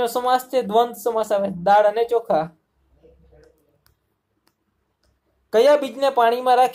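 No technical faults can be heard anywhere in the audio.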